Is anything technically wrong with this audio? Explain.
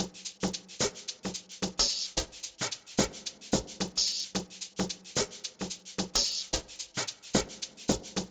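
Yes. Throughout the clip, the resampler restarted on every block. The conversion from 16 kHz to 48 kHz was done in separate 40 ms chunks, so at each block boundary the filter lacked the real neighbouring samples and left a small error. The result is a steady tick train at 25 Hz, almost a low buzz, that rides on the sound and vanishes in quiet passages. Mains hum persists through silence, and buffer dropouts fall irregularly; these ticks do neither.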